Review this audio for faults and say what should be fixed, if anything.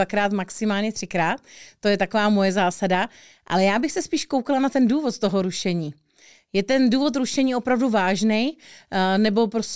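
Nothing stood out on listening to this speech, so there is nothing here that calls for a fix.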